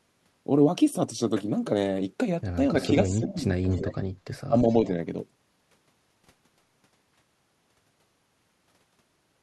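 At 2.81 to 2.88 s a faint delayed copy of the speech appears, an echo leak trailing the original by 338 ms at roughly 15 dB below it, likely a far-end loudspeaker's echo canceller letting part of the microphone pickup through. From 2.83 to 3.67 s the speech dips by up to roughly 15 dB, about half a second in total, consistent with speech suppressed in double talk, as the canceller cannot separate the talker from the echo. The echo returns at 3.71 to 3.94 s with the same 338 ms delay and similar level, and at 4.48 to 4.57 s the speech briefly drops again by about 20 dB.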